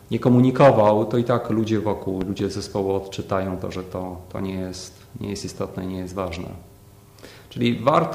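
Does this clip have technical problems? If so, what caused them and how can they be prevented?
Yes, there's a loud pop, actually a quick pair of them, between 2.21 and 2.42 s, jumping well above the surrounding level, something like 10 dB over it, while the sound carries on underneath. That double thump is likely a sudden voltage step hitting the line, say a cable being plugged in, a switch being flipped or a static discharge, which the downstream circuitry then shapes into a pulse. To avoid it, mute or power down the chain before connecting or switching anything, and keep static in check around the gear.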